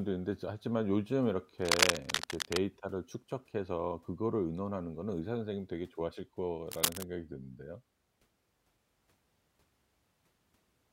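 Scratchy, uneven noise bursts cover the speech from 1.62 to 2.60 s, a bit louder than the speech, and again from 6.71 to 7.03 s at about speech level. That's cable scratch noise, likely a worn connector or cable being moved.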